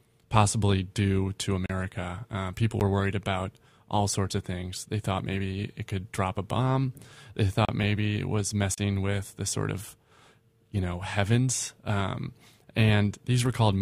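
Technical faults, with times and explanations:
1.66–8.78 s, block of digital silence: gaps at 1.66 s (35 ms, after "possibly do to"), 2.80 s (12 ms, before "were worried about all"), 7.65 s (35 ms, before "maybe it was") and 8.74 s (35 ms). The audio drops straight to silence and back with no fade. The 12 ms gap fits one 512-sample output buffer left unfilled, and the 35 ms gaps fit about three.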